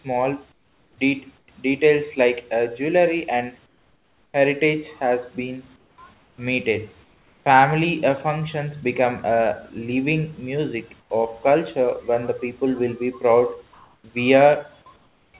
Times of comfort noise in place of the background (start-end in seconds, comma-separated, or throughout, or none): 0.52-0.98, 1.38-1.48, 3.66-4.34, 5.76-6.38, 7.04-7.46, 11.00-11.10, 14.96-15.34